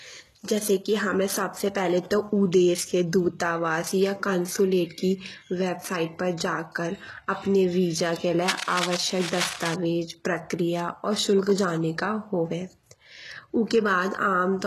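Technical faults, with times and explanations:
Throughout, HE-AAC compression: the speech carries heavy codec damage, and nothing is present above 12.3 kHz, which fits a low bitrate of around 16 kbps. The treble is most likely rebuilt by spectral band replication, copied upward from lower bands, so harmonics misalign and s sounds turn gritty or metallic. A spectrogram shows blocky, repeated upper-band texture ending in a hard ceiling.
8.41–9.75 s, cable scratch noise: after "कर अपने वीज़ा के" and before "प्रक्रिया और शुल्क", dense, uneven bursts of scratching sit over the speech, only moderately below it. The likely cause is a worn cable or connector whose contact resistance flickers as it moves. The waveform shows ragged spikes; the spectrogram shows broadband vertical streaks.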